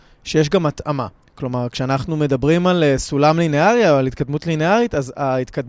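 No technical faults can be heard in this recording.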